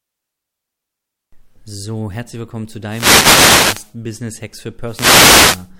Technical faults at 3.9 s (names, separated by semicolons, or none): wireless microphone noise hit